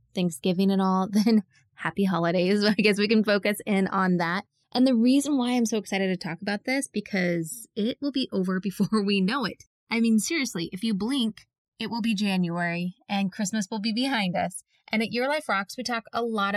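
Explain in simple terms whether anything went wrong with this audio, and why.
The two channels are drifting apart throughout this speech. They run on slightly mismatched clocks, which fits an error of roughly 100 parts per million, so one channel slowly lags until it trails by about 1.5 milliseconds. Played together, this produces a slow, sweeping, flanging whoosh.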